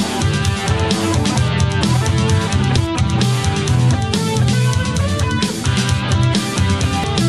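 At 2.77, 4.53 and 7.04 s the audio jumps ahead by about half a second, half a second and a tenth of a second: compressed frames skipped, consistent with roughly five, seven and one 92.9 ms frames going missing.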